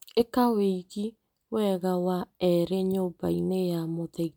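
No audible technical faults.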